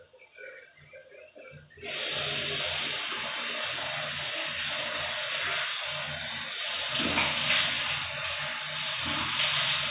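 No technical faults can be heard anywhere in this recording of sounds.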